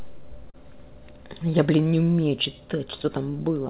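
A speech recording carried over a narrowband call path with no content above 4 kHz, which fits G.711 mu-law, shows clock drift between sender and receiver throughout: the sender's clock runs roughly 4 percent slow, so the receiver's buffer keeps draining rather than overflowing. Unlike a single network glitch, this produces a steady, one-directional pull across the whole clip. The result is repeated timing corrections from 0.01 to 3.33 s. The receiver keeps inserting tiny stretches, playing at about 97 percent speed and adding around a tenth of a second in total. This is heard, if at all, as slight hiccups or an unsteady tempo rather than audible gaps or clicks, which sets it apart from dropped packets. A short stall from a late packet occurs at 0.50 to 0.56 s, where the buffer ran empty and the last sound was held for 38 ms with a slight buzz or dip. Nothing is lost, and playback resumes from the same point, unlike concealment of a genuinely missing packet.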